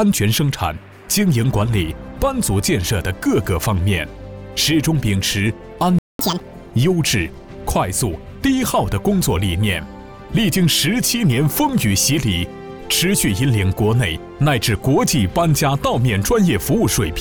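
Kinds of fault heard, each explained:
Playback stall: The sound cuts out abruptly at 5.99 s and stays silent for about 207 ms, likely because the player ran short of data.
Catch-up at higher speed: From 6.19 to 6.40 s the backlog plays at double speed. Pitch jumps roughly ten semitones, then settles back to normal.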